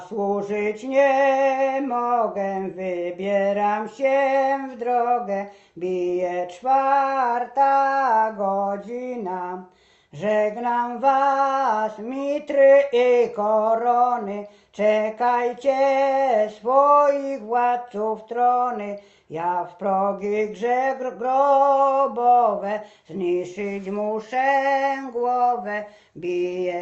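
No technical faults can be heard at any point in this audio.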